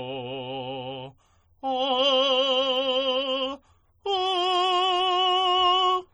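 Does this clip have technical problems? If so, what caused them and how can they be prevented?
Yes. Throughout the music, the upper detail has a watery, swirling quality, with transients sounding smeared rather than crisp. The damage is heavy and most likely comes from MP3 compression at a low bitrate, which fits roughly 32 kbps. Starved of bits, the encoder discards quieter spectral components, which then switch in and out between frames and produce the swirl. To prevent this, encode music at 128 kbps or higher, or keep a lossless copy.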